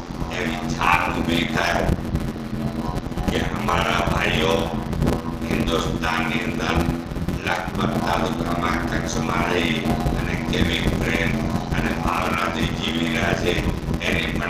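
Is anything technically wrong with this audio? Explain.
Yes, there's a block size mismatch (padded) throughout. One stage writes shorter blocks than the next reads, and zeros fill the rest, which fits a 512-sample read block. That gives a steady 86.1 Hz buzz, and everything plays at 0.625 times normal speed with pitch about unchanged.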